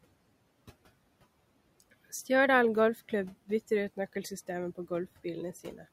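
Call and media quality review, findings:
Speech cut by the noise suppressor, 5.64–5.84 s: sound ducked about 7 dB for roughly a tenth of a second. It fades rather than cutting out, unlike packet loss.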